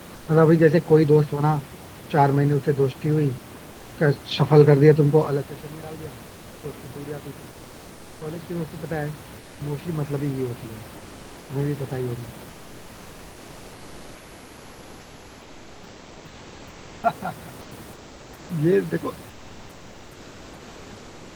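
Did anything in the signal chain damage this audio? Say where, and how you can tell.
Yes. In the pauses at 0.15–0.27, 3.71–3.91, 7.51–8.21, 9.39–9.59, 10.97–11.49, 12.49–17.03, 17.61–18.49 and from 19.29 s to the end, the room background, about 26 dB below the loud parts, turns into flat, detail-free hiss about 1 to 3 dB quieter. This is comfort noise in place of the background, likely from Opus DTX in the codec stage: transmission halts during silence and the receiver synthesises shaped noise.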